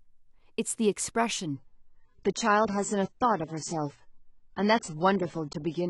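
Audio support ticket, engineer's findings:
Adaptive stream at a lower bitrate, 1.53 s to end. Sudden quality drop, no gap. Nothing above 8.3 kHz, codec artefacts rise. Connection slowed, player switched to a lower-bitrate rendition. Sound points to AAC-LC stepping from about 96 to 16 kbit/s.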